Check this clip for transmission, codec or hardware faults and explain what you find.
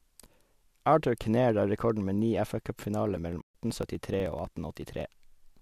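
Two faults are audible in this speech, both in the second half.

AAC frame loss with muting, 3.41 to 3.54 s: about 140 ms of decoded spectrum is zeroed, which fits roughly fourteen short frames, so the overlapping windows fade it into a soft-edged gap.

Periodic USB or driver dropouts, 3.70 to 5.57 s: about every 0.062 s, around 2 ms of audio is skipped, giving roughly thirty evenly spaced ticks while sound is present.

The slight graininess underneath is likely from low-delay AAC compression, where coding noise sits between the voice's harmonics.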